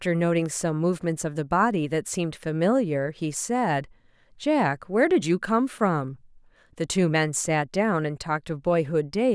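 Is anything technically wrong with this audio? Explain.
No, nothing is technically wrong with this audio.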